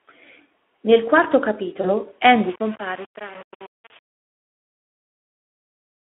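At 1.81 s a packet went missing, and the decoder bridged the gap by extending its last pitch and filter at falling gain. This is VoIP packet loss concealed by the speech codec. Speech turns briefly stretched and weak until 1.91 s, which fits one lost 20 ms frame.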